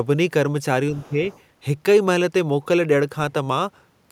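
From 0.96 to 1.03 s and again from 1.31 to 1.4 s, faint scraps of the other side's voice leak through, likely residual loudspeaker echo, quiet enough to sit well under the talker. Between 1.03 and 1.2 s the talker's own speech is suppressed during double talk, dipping by around 10 dB. The near voice itself turns down.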